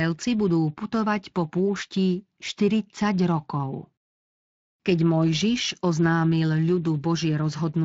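From start to finish the speech carries plainly audible Speex codec damage: a coarse, hoarse grain from the CELP coder having too few bits to model the excitation properly, which fits a setting somewhere around 20 kbps rather than a clean one.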